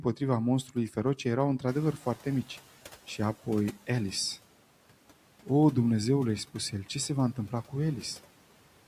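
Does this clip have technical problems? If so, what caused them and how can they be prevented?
Yes, there are two. The room noise jumps by about 12 dB at around 1.5 s, and from 1.67 to 2.63 s you can hear the noise suppressor catching up. Its noise estimate is still tuned to the quieter room, so the new background comes through with little reduction, then sinks by about 9 dB as the estimate adapts over roughly 960 ms. To prevent it, use a suppressor with faster noise tracking, or keep the noise source steady.

Between 1.93 and 2.25 s, there's speech cut by the noise suppressor. While the suppressor is still adjusting, it mistakes a few quiet bits of speech for background, about a tenth of a second in total, and turns them down by up to about 10 dB. Those parts sound swallowed. To prevent it, use gentler suppression with better speech protection so soft sounds aren't treated as noise during an adaptation.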